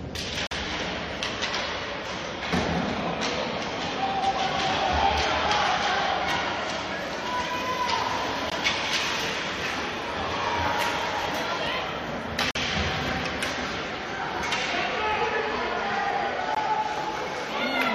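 At 0.47, 8.5, 12.51 and 16.55 s, hard-edged silent holes cut the sound. Each is a gap between stream segments, lasting 45, 16, 44 and 18 ms. They fall on 4-second segment boundaries. Time stamps leave space, and the player fills it with silence.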